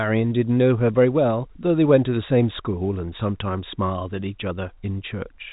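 No technical faults can be heard in this speech.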